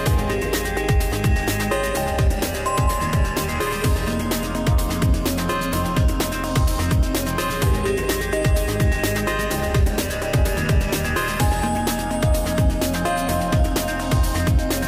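One short fault in this audio: a bit error spike at 12.69 s, a lone sample jumping to about -31 dBFS from a flipped bit, giving one sharp tick.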